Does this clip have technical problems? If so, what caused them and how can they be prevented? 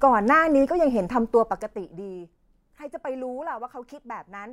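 Yes. Zipper noise runs from 1.16 s to 2.21 s, while the speech level drops by roughly 20 dB. Instead of gliding down, the gain moves in discrete jumps at about a hundred steps per second, which suggests an update once per audio buffer of around 10 ms. Each jump makes a tiny discontinuity in the waveform, and together they form a fine ticking buzz that sits on the speech for the whole fade. To prevent it, interpolate the gain sample by sample, or use a short smoothing ramp, so the level never changes in abrupt steps.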